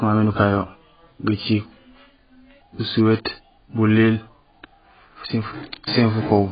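From start to finish the speech is dull and band-limited, with nothing above 4.9 kHz and a warbling, fizzy smear on sibilants, likely from heavy AAC compression at a very low bitrate, near 12 kbps. A spectrogram shows a hard ceiling and patchy, holed upper bands.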